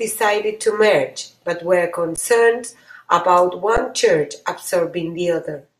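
Speech with two underruns with held sample, at 2.16 s just after "to merge but were" and at 3.77 s. The output buffer ran dry, so the waveform freezes flat for about 15 ms and 10 ms. Roughly that much live audio was lost each time.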